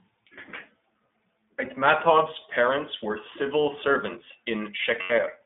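A speech clip carried throughout by the iLBC codec. The sound is band-limited to roughly 200 Hz to 3.6 kHz, with nothing above. It sounds plainly rough and synthetic, which fits the 15.2 kbps mode coding 20 ms frames independently. From 5.02 to 5.12 s there are lost iLBC frames. The decoder fills the roughly 80 ms hole by repeating the last pitch cycle mixed with noise, which fits about four missing frames. It sounds like a brief held, buzzy vowel. The voice returns to normal almost at once.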